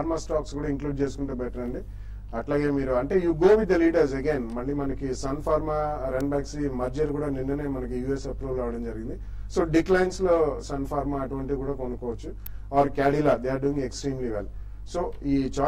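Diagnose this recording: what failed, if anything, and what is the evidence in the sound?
Two sharp snaps sit on top of the audio at 6.21 s and 12.46 s. The first peaks around -20 dBFS, and the second is louder at about -10 dBFS. These point to an electrical switching spike, most likely a nearby switch, motor or static discharge arcing into the analogue wiring. Each burst lasts only a few milliseconds and adds to the signal rather than interrupting it, which separates it from buffer or codec dropouts.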